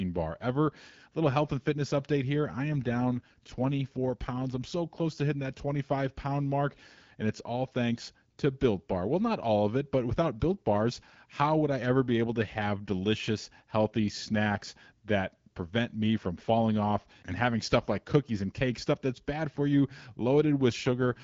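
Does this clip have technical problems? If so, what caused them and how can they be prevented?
Yes. From 2.73 to 4.70 s, between "fitness update here I" and "close to hitting that", and again from 20.83 s to the end, the speech turns rougher and more synthetic. The bandwidth stays the same and there is no gap. This is an AMR rate drop: the wideband codec falls back, which fits a switch from 12.65 to 8.85 kbit/s, to spend bits on protecting a weak radio link. A stronger, more stable signal, or a Wi-Fi calling path, keeps the codec at its higher rate.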